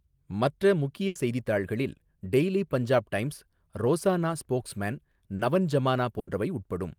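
It's a speech recording, and it's hit by network loss three times. There are two bursts of packet loss, at 1.07 to 1.18 s, just before "செய்தித்தாள்களில் டெய்லி பஞ்சாப் டைம்ஸ்", and at 6.19 to 6.30 s, right after "டைம்ஸ் ரோசானா ஸ்போக்ஸ்மேன் நவன்". In each, roughly 80 ms never arrived in time, so the receiver kept extending the last bit of sound and faded it down before picking up again further along, with that stretch simply gone. Between them, at 5.35 to 5.42 s, just after "பஞ்சாப் டைம்ஸ் ரோசானா ஸ்போக்ஸ்மேன்", there's a short concealed packet loss. Only about 40 ms went missing, and the decoder patched it by continuing the preceding sound and blending back in, so you get a brief smear or wobble rather than an audible hole.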